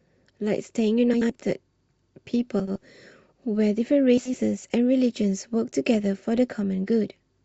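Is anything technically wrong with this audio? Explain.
Yes. Frames out of order at 1.13–1.31 s, 2.59–2.78 s and 4.18–4.38 s. Two neighbouring 80 ms blocks play swapped, giving a garbled flutter.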